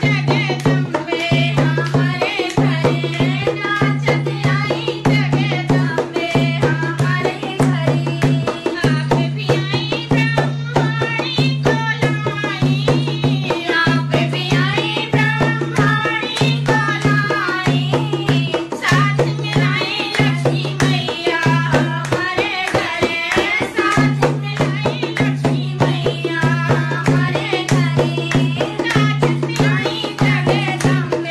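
No technical fault can be heard anywhere in the audio, and the signal holds steady and continuous throughout.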